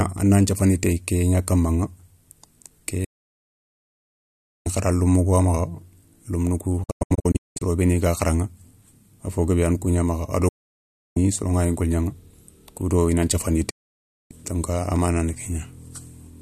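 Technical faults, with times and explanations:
3.04 to 4.67 s: digital broadcast dropout. The receiver loses good frames and mutes within 8 ms. That programme is gone.
6.83 to 7.62 s: digital broadcast dropout, as several short holes. The longest is 192 ms.
10.48 to 11.17 s: digital broadcast dropout. The mute lasts 0.67 s.
13.70 to 14.31 s: digital broadcast dropout. The mute lasts 0.6 s.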